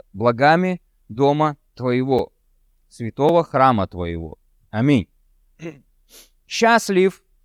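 At 2.19 s the speech drops to a block of digital silence lasting 5.8 ms, and at 3.29 s, just before "храма твоего", a second one lasting 2.9 ms. The lengths fit 256-sample and 128-sample blocks, which points to output buffers that were not filled in time and went out as zeros. Each hole starts and ends abruptly with no fade, so both are heard as a tick or dip rather than a gap.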